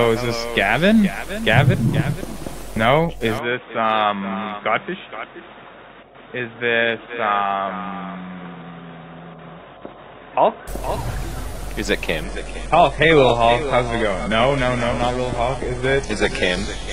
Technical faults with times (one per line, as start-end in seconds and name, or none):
3.39-10.68 input switched to a poorer device
12.23-16.93 adaptive stream at a lower bitrate